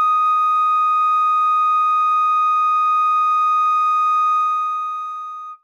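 A music clip in which, from 4.36 to 5.43 s, a fast ticking or zipping rides on top of the sound as the level falls by roughly 15 dB. That is zipper noise: the gain is being lowered in coarse steps, around thirty a second, with no smoothing between them, so each jump in level puts a small click into the waveform.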